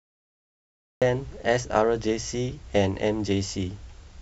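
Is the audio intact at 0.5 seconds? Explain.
No. At 0.5 seconds the clip is still inside a cut-off start, digital silence from 0.0 to 1.02 s, because capture began late. Speech then enters abruptly mid-sound at 1.02 s, with no attack, appearing as a flat waveform and a hard vertical edge on the spectrogram.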